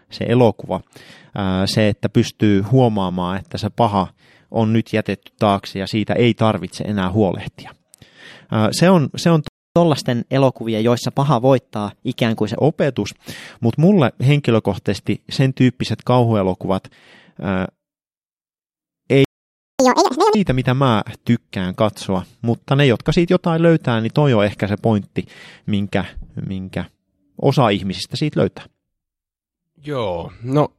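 A playback stall at 9.48 s cuts the speech off right after "on se on" and leaves about 0.28 s of silence, most likely because the player ran out of buffered data or its thread was blocked. Catch-up at higher speed follows from 9.76 to 12.56 s: the player plays its backlog at 1.1 times normal speed to win back the lost time, so the speech is slightly hurried and about a semitone and a half sharp until it settles just before "opetus mutta mulle henkilökohtaisesti".

A second playback stall at 19.25 s silences the speech for about 0.55 s, likely from the same starved or blocked output. The catch-up at higher speed from 19.80 to 20.35 s is much harsher. It runs at double speed and raises the pitch by around ten semitones, close to an octave, which gives a brief chipmunk-like squeak before normal playback resumes at "mitä mä tykkään katsoa".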